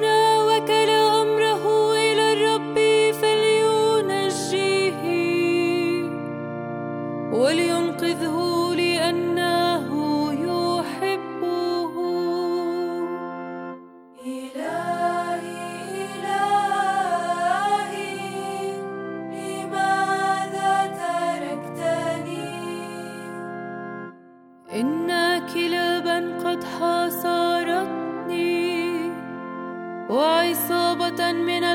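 Nothing technically wrong can be heard anywhere in the audio. No dropouts, glitches or other interruptions occur at any point.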